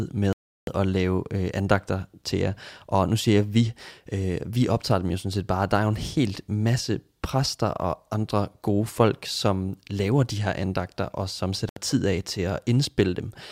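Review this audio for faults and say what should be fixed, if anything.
The speech drops to dead silence twice, from 0.33 to 0.67 s (about 0.35 s) just before "at lave øh andagter", and from 11.69 to 11.77 s (about 70 ms) between "her andagter og som" and "tid af til". The likely cause is a Bluetooth stall: delayed packets emptied the headphones' buffer, so playback paused and then resumed. On a waveform each gap is a flat line; on a spectrogram it is a clean vertical blank band. Keeping the phone close to the headphones, away from Wi-Fi and other 2.4 GHz interference, should prevent it.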